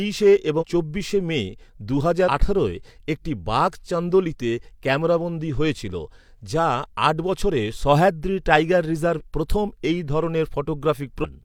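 Speech with compressed frames skipped at 0.58, 2.24, 9.15 and 11.20 s: roughly 100 to 150 ms vanishes each time, which fits 43 ms frames. Each time the audio jumps ahead rather than leaving a silent gap.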